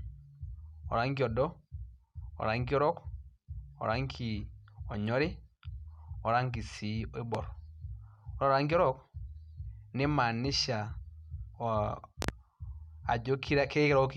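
A speech recording with two loud pops laid over it. The first, a single pop around 7.35 to 7.38 s, peaks about 15 dB above the speech. The second, at 12.22 to 12.32 s, is a double pop in quick succession, reaching about 20 dB above it. The speech runs on unbroken beneath both, which separates these from a dropout or gap. They are most likely voltage jolts from a plug, switch or static discharge.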